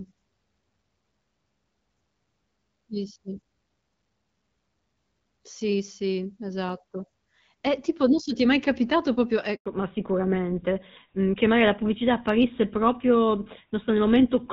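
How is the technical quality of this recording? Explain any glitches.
The call has two linked faults, both close to 9.6 seconds.

The first is a handover gap from 9.56 to 9.66 s. The phone moved the call to a different network. No speech frames arrived while the link switched. The sound fades out within a few tens of milliseconds. Then there is silence until the new link carries audio again, 100 ms after the gap began. Whatever was said in that window is gone and cannot be recovered.

The second is a fallback to narrowband, running from 9.66 s to the end. Before the switch, the audio has the fuller HD Voice character of the AMR wideband codec, with only light coding damage. Its clarity fits a rate around 12.65 kbit/s. After the handover, the call drops to an older narrowband codec, consistent with GSM full rate. Nothing above 4 kHz survives. Speech sounds duller, more muffled and rougher for the rest of the clip.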